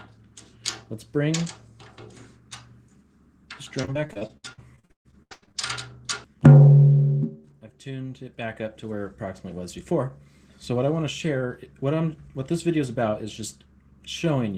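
From 3.81 to 5.56 s the audio suffers repeated packet loss, giving a robotic sound. Data went missing or arrived late again and again across this stretch. Each hole was patched by stretching the last sound forward, and the next hole came soon after. The longest gap runs 135 ms. Around two-fifths of the stretch is concealed. The result is choppy and robotic, with fragments clipped out.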